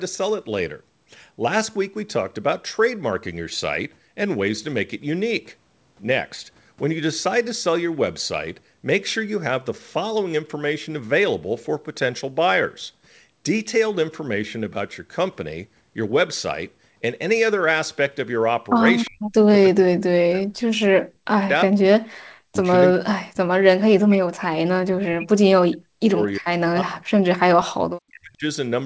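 An echo leak at 19.05 to 19.1 s in this speech recording shows up as a faint scrap of delayed voice, a copy trailing about 352 ms behind and sitting roughly 30 dB below the speech. It is likely that the far end was playing the call on a loudspeaker and its echo canceller let a sliver of that pickup slip through and travel back. Speech suppressed in double talk follows right after, at 19.09 to 19.29 s, 19.71 to 21.98 s, 22.5 to 23.38 s, 23.76 to 24.56 s, 24.89 to 27.26 s and 27.59 to 28.45 s. In these spans the voice sinks sharply, by as much as around 40 dB. The likely cause is that both sides were talking at once, and the canceller, unable to tell the local talker from loudspeaker echo, turned everything down. The spans stretch from a fifth of a second to about two seconds each. The audio has nothing above 8 kHz, which points to a wideband call codec such as G.722.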